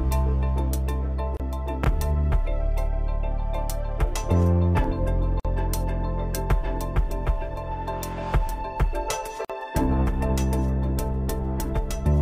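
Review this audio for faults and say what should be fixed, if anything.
Separately encoded pieces were joined without trimming each run's start-up delay and end padding, leaving a gap at a join of encoded pieces roughly every 4 s: 1.37 to 1.40 s (29 ms), 5.40 to 5.45 s and 9.45 to 9.50 s (49 ms each). Continuous sound drops out with smeared edges, then resumes where it stopped. To prevent this, trim each piece's encoder delay and padding before joining, or encode the whole sound in one gapless pass.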